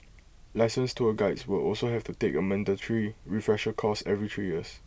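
No technical faults can be heard anywhere in this speech recording. There is nothing in the signal that needs a timestamp or an explanation.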